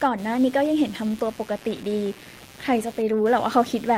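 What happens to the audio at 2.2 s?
At 2.2 s, computer activity noise runs under the speech as a buzz pulsing at around 150 Hz, roughly 20 dB down. Processor or peripheral load is shifting the audio circuit's shared ground.

Clock drift between sender and receiver is present: the sender's clock runs about 1.5% slow, so the receiver's jitter buffer keeps draining and must be padded.

Repeated timing corrections span 0.04 to 3.16 s. The receiver stretches the audio to about 98% speed, adding roughly 70 ms in small, unevenly spaced repeats.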